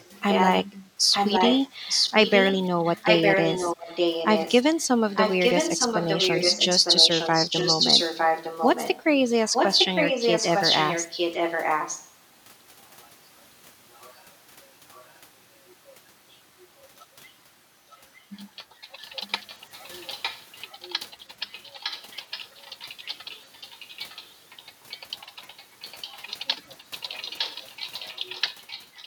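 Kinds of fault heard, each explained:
echo leak: The far side's echo canceller likely failed to remove loudspeaker sound its microphone picked up, sending it back. A copy of the speech trails by 0.91 s, as loud as the original for the first 12 s, then faint scraps until 18.26 s, growing stronger from 19.28 s onward.
background gated by the echo canceller: While the loudspeaker played, the echo canceller turned the microphone down hard. The room background dips by about 13 dB for roughly a fifth of a second, between 0.81 and 1.03 s, then returns when the canceller releases.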